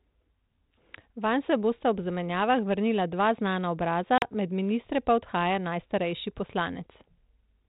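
At 4.18 s, right after "zamenjavah vrnila dva znana", packet loss on an ADPCM call cuts a hard-edged silent hole of about 40 ms, roughly a couple of packets, in the 32 kbit/s G.726 speech. Unlike a plain dropout, the audio returns at "med ministre pa odhaja" slightly distorted while the decoder's predictor and step size resynchronise, settling by 4.25 s.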